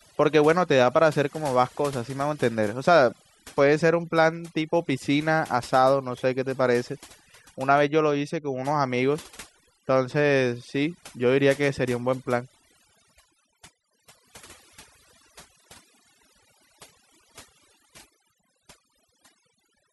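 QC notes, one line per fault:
Throughout: overdone noise removal, a noise reduction stage set too aggressively, gating frequency bands near its noise estimate, leaving a lowered background that breaks up into twinkling specks.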